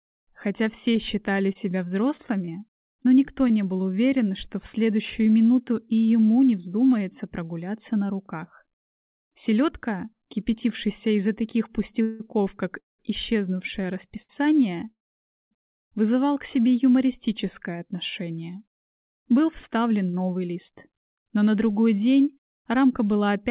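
The audio has passed through a narrowband call path with nothing above 4 kHz, consistent with G.711 mu-law at 64 kbps. From 0.92 to 3.52 s there are scattered short gaps: about ten lost or late packets, the longest around 30 ms, each patched by continuing the preceding sound. This leaves brief ticks and smears, with about 100 ms of audio actually missing. Between 12.02 and 14.31 s, repeated stalls (stutter) occur as the jitter buffer runs dry three times. The longest wait is 196 ms, 448 ms is filled in total, and nothing is lost, but the audio drags. From 14.91 to 15.53 s a call audio freeze fills 600 ms, mostly silence lasting 560 ms, likely from delayed packets emptying the buffer, before the audio resumes where it stopped. From 18.49 to 21.27 s a jitter buffer speed-up removes roughly 200 ms of pitch-period segments, so the audio runs at 107% speed with pitch unchanged and sounds hurried.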